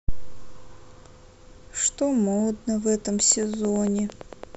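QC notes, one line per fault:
3.2–4.56 s, train of clicks: about fifteen evenly spaced ticks at 8.9 per second, poking roughly 5 dB above the speech, likely nearby interference or a faulty connection or power supply.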